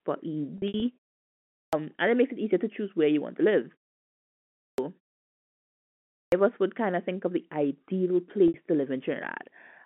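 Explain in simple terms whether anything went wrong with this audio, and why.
A couple of things went wrong here, both on the sending or playback side.

First, packet loss with pitch repetition. Around 0.58 to 0.82 s, small chunks of speech, about 120 ms in total, went missing, and the receiver filled each gap by repeating the last bit of voice, so it sounds briefly held and buzzy. It happens again at 8.48 s, right after "think of the ideal", for about 60 ms.

Second, clipped start after a pause. The playback device seems to doze off during silences and takes roughly a quarter of a second to wake up, so speech begins abruptly with its opening chopped off: at 1.49 s before "and it makes it", at 4.55 s, and at 6.09 s before "of us would kind".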